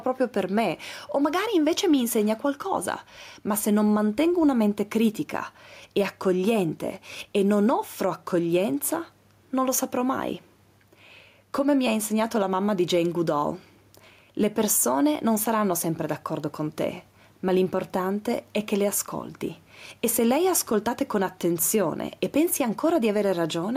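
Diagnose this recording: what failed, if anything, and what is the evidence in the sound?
Gain pumping runs through the clip: the room noise, about 43 dB under the speech, swells in every pause and ducks roughly 5 dB when speech starts. That's likely mic gain set far too hot, with a fast limiter or compressor clamping down during capture.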